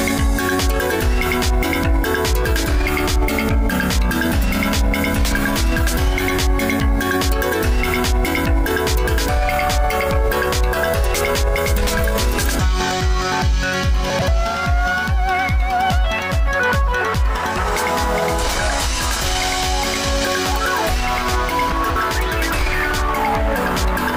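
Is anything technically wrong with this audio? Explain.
Yes. Chunks out of order occur at 14.1 to 14.28 s and 21.72 to 21.96 s. A 60 ms chunk arrives late and plays two, then three, chunks after its proper place, so the sound briefly jumbles.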